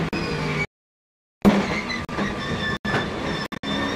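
At 0.65 s the sound cuts out cleanly until 1.50 s, then picks up further along, as though it kept playing underneath. Around 3.46 to 3.66 s there are several brief holes, the longest about 56 ms. This is most likely a Bluetooth dropout, with late packets discarded.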